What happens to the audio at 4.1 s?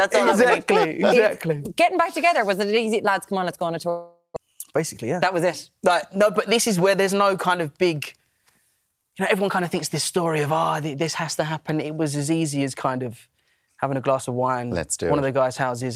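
A long network dropout runs from 3.89 to 4.38 s: the last sound smears into a fading buzz, then about 120 ms of silence, likely from lost packets, with roughly 0.4 s skipped on return.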